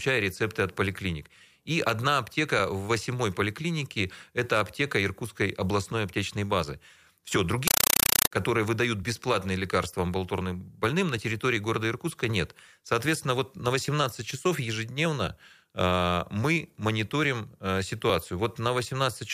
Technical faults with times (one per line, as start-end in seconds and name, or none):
7.68-8.31 compressed stream played as audio